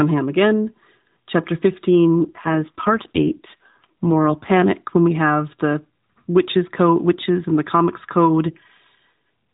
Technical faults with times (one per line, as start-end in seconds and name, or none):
2.20-4.71 AMR rate drop